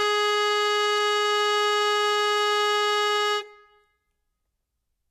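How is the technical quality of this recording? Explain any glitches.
The technical quality is held back by plainly audible lossy coding damage across the whole music clip, likely from Vorbis compression. From start to finish, nothing sounds above about 13.8 kHz, and the treble that remains is hissy and grainy. Sustained tones have a roughened edge, and attacks sound smeared. At low quality the codec keeps a smooth spectral outline but quantises the fine high-frequency detail so coarsely that it turns into noise of similar energy, which fits a bitrate around 26 kbps.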